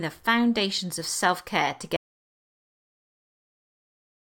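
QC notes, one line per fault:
1.96 s to end: audio dropout to silence, speech cuts off right after "foundations of self care" into silence with no room tone, likely from lost input.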